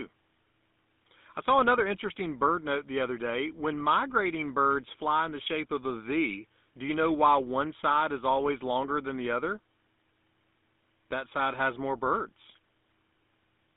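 GSM full-rate codec damage runs throughout the speech, confined to a band of about 200 Hz to 3.6 kHz, which fits a 13 kbps GSM link. The codec rebuilds the voice from a vocal-tract model and sparse pulse excitation, leaving a plainly audible buzzy, gravelly roughness.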